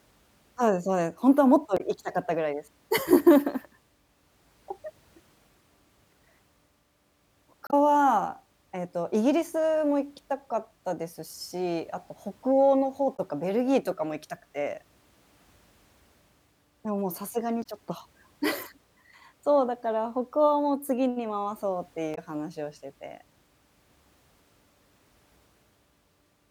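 Damaged data in a compressed stream causes brief glitches at 1.77–1.81, 7.67–7.74, 13.15–13.20, 17.62–17.66 and 22.14–22.18 s, each 40–70 ms long. The decoder misreads the corrupted frames, loses sync and resumes at the next valid header, giving short glitches in the speech.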